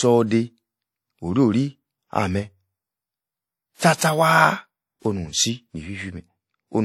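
A speech recording with codec damage that is plainly audible throughout. The top of the spectrum stops at about 16.5 kHz, and the rest carries a ringing, washy texture with hiss that rises and falls with the signal. That points to lossy transform coding, most likely WMA compression at a rate consistent with around 48 kbps. Coarse quantisation of long transform blocks smears noise over tens of milliseconds and drops weaker spectral detail. One pre-echo sits at 3.76 to 3.81 s, where a short burst of hiss runs about 59 ms ahead of a sharp onset and softens its attack. The transient landed late in a transform block, so quantisation noise sized for the loud part was spread evenly across the whole block, including the quiet stretch before it.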